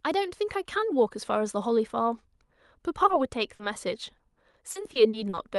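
At 3.07 to 3.11 s and again at 3.55 to 3.61 s there's short concealed packet loss: a few tens of milliseconds went missing and the decoder stretched the last sound over the hole, leaving a brief smear. From 4.17 to 5.39 s it turns into repeated packet loss with a robotic sound. Seven gaps, the longest about 40 ms, get patched one after another, so the sound goes choppy with bits dropped out. Underneath, the call codec's top end stops around 12 kHz.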